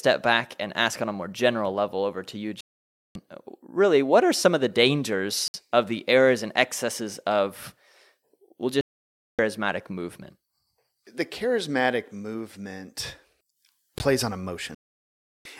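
A speech clip with two kinds of trouble. There are three digital broadcast dropouts, at 2.61 to 3.16 s, 8.81 to 9.39 s and 14.75 to 15.45 s. Each time the receiver mutes after losing good frames, and the holes run 0.54, 0.58 and 0.70 s, lengths that fit runs of 32 ms frames going missing. Separately, there are two blocks of digital silence: a 60 ms hole at 5.48 to 5.54 s and a roughly 16 ms one at 13.98 s. The sound cuts straight out with no fade, which points to the output buffer not being filled in time.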